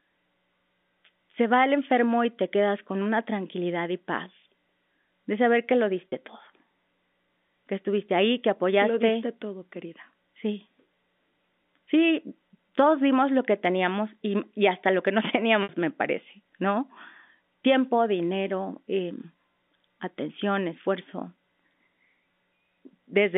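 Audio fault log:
6.10–6.12 s and 15.63–15.69 s, packet loss with pitch repetition: two dropouts, about 30 ms and then 60 ms of audio gone, which fits one lost packet and then two. Each time the receiver loops the last pitch cycle to cover the hole, so the sound briefly holds on a slightly buzzy, frozen tone. The longer gap stretches that repeat further and the sound fades before it recovers. It all sits inside the usual 200 Hz to 3.6 kHz telephone band.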